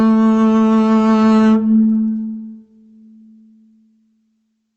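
Throughout the music, the input gain is set far too high, likely with a fast limiter or compressor clamping the level whenever a loud passage arrives. The result is gain pumping, with the gain swinging by around 10 dB. Loud and soft parts end up close together, leaving the music squashed and breathing, all heard through the call codec's coding noise and a top end that stops near 8 kHz.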